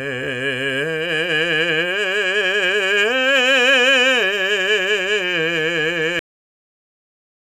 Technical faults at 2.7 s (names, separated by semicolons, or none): none